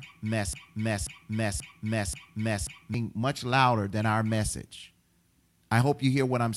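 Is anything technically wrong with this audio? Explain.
Yes. From 0.53 s to 2.94 s the speech falls into a broken-record loop. A fragment 0.53 s long plays five times in a row. Each copy is identical and butts straight against the next. The player, encoder or stream likely stalled and kept resending the last piece it held. The speech that belonged in that stretch is missing. Normal playback resumes with "much louder than our".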